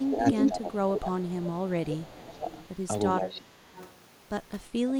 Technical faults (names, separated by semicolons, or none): speech suppressed in double talk; echo leak